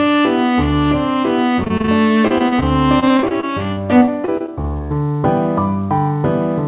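Repeated packet loss (robotic sound) hits at 1.64–1.90 s, 2.28–2.64 s and 3.00–4.82 s: short dropouts, up to 40 ms, get patched by stretching the previous sound, leaving it choppy over the band-limited, 4 kHz-capped call audio.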